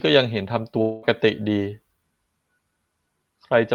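Long network dropout, from 0.81 to 1.05 s in this speech clip: about 0.22 s of sound never arrives, and the receiver covers almost the whole gap by stretching the last sound into a fading, buzzy fill rather than leaving silence. A lost stretch of packets is the likely cause. Speech resumes afterwards with that section missing, carried through a call codec whose top end stops around 12 kHz, which fits Opus.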